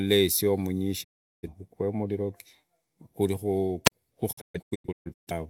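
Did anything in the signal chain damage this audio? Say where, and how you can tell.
Yes. The first damage is a digital broadcast dropout, at the transmission stage. At 1.03 s the speech fades out over about 20 ms and stays silent until 1.49 s. Roughly 384 ms of programme is gone, which fits about nine lost frames. It returns again between 4.31 and 5.32 s, as scattered holes. About 597 ms is lost across some 939 ms, the longest gap being 128 ms. The receiver muted whenever frames failed.

The second is a wireless microphone squelch dropout, in the radio link before the mixer. From 3.85 to 3.92 s the signal weakens, hiss rises, then the output mutes for about 43 ms. That mute comes from the receiver's squelch, which closes when the FM carrier falls too low. The speech then comes back. The hole is very short.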